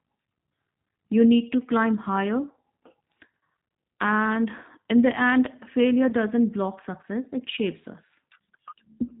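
Speech runs through a G.729 codec for its whole length, and the damage is plainly audible. Nothing above 4 kHz survives, and the voice has the slightly rough, synthetic edge of speech rebuilt from a vocal tract filter, a pitch predictor and a few pulses per subframe, which fits an 8 kbit/s stream. Plain band-limiting would only dull the sound, and an MP3-style codec would swirl in the treble. Here the graininess sits in the voice itself, which is the mark of a parametric speech coder. At 6.09 s there is VoIP packet loss concealed by the speech codec. For a brief moment the decoder carries its last pitch and filter forward at falling gain, giving a stretched smear instead of silence, consistent with a single missing 10 ms frame. The voice stays weakened until about 6.12 s while the predictor recovers. That lingering recovery is what separates it from a dropout or a hard cut, which would stop and restart abruptly.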